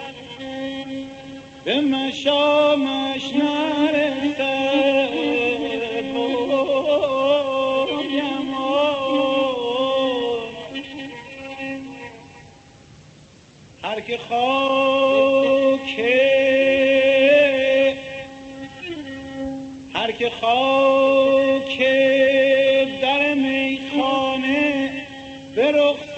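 Nothing in the audio stands out as a technical problem. It has come through a WebRTC call path, and the content stopping at about 8 kHz fits Opus running at a moderate bitrate, around 40 kbps.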